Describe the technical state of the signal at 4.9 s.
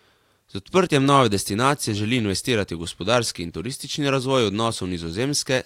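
At 4.9 s the speech is inside a run of clock drift buffer slips that lasts from 0.77 to 5.01 s. A short click recurs every 1.42 s, about four times in all, and the last one falls near the end of that span. The likely cause is two devices running on separate clocks that disagree by roughly 150 parts per million. Their shared buffer drifts until a few samples are dropped or repeated, and each slip is heard as a tick.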